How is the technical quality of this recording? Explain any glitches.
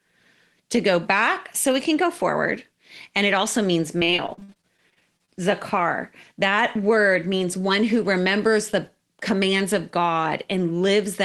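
Two glitches stand out, both typical of audio carried over a call link. The sound is band-limited to about 12 kHz, with coding noise consistent with Opus at a low bitrate, around 20 kbps.

From 3.99 to 5.30 s, right after "and it also means", there is repeated packet loss, giving a robotic sound. Well over a dozen gaps follow one another closely, the longest about 51 ms. Each is bridged by extending the previous sound, so about 28% of that stretch is synthetic fill. It sounds choppy and robotic. On a spectrogram, harmonics smear into flat, buzzy blocks broken by thin vertical dropouts.

From 6.58 to 7.41 s, just before "one who remembers the", a jitter buffer speed-up plays the audio about 6% fast. The receiver trimmed roughly 50 ms in total by cutting out one or a few pitch periods at a time to reduce built-up delay. Pitch stays the same but delivery sounds hurried. A spectrogram shows unchanged harmonic spacing with compressed syllables, and the waveform shows small splices between pitch cycles.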